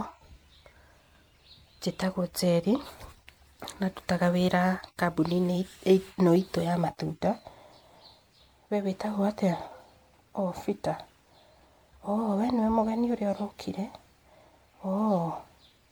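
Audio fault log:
throughout, generation loss: the speech sounds swirly and hollow, with a smeared, watery texture around the voice and consonant onsets that blur instead of landing cleanly. The damage is heavier than a single moderate-bitrate encode would leave, though content reaches up to 20 kHz. The likely cause is repeated lossy coding, something like seven passes through MP3 at a rate that fits 96 kbit/s, each pass re-quantising on a shifted frame grid so noise and spectral gaps accumulate.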